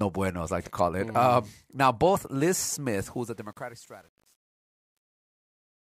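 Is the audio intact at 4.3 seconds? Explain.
No. At 4.3 s the fade-out shows truncation distortion, from 3.01 to 5.87 s. Too few bits, consistent with about 9, and no dither leave gritty steps, worst after 3.32 s.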